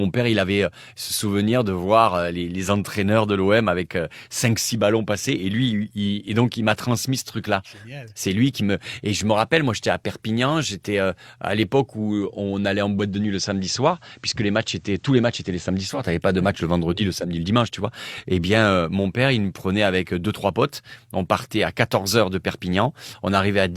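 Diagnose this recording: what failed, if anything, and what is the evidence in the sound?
The hybrid radio's digital reception failed, so the tuner cross-faded to the station's FM analogue broadcast at 12.95 s and back at 16.11 s. This is digital radio blending to analogue. Each crossover takes about 328 ms. During the FM stretch a low hiss comes up roughly 40 dB under the signal. The level stays the same through both blends, so the change is in the added noise.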